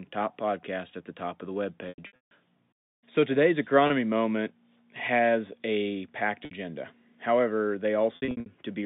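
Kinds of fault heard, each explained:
Packet loss with pitch repetition: lost stretches of speech are filled by repeating the last pitch period, so short gaps sound like a held buzz and longer runs, up to 150 ms, fade toward silence. A spectrogram shows frozen harmonic stripes tapering into blank space.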